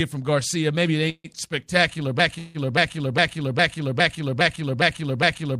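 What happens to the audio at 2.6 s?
At 2.6 s you're inside a broken-record loop that starts at 2.19 s and runs to the end. A chunk of about 0.41 s repeats back to back, most likely because the stream stalled and kept resending its last fragment, so the audio that should follow is gone.

On top of that, a call audio freeze covers 2.38 to 2.66 s. The repeating sound gets smeared out into a fading buzz for about 162 ms with no silence, likely because the jitter buffer briefly ran dry, and then playback picks up again.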